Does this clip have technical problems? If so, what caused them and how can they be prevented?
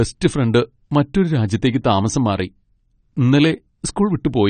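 Yes. AAC compression throughout: nothing above 9.1 kHz and a dull, smeared, warbly sibilance, likely from AAC-LC at a low bitrate around 32 kbps. Export at a higher bitrate or keep an uncompressed master.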